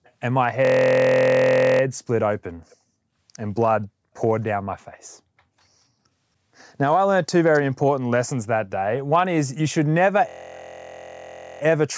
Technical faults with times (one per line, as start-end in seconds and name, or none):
0.04-0.11 echo leak
0.65-1.81 system hang loop
2.70-2.76 echo leak
3.83-3.87 echo leak
7.53-7.60 echo leak
10.29-11.61 system hang loop